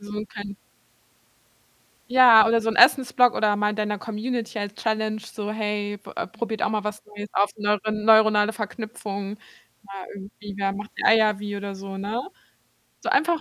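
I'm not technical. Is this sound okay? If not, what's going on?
Yes, nothing in this recording stood out as a problem when I listened to it.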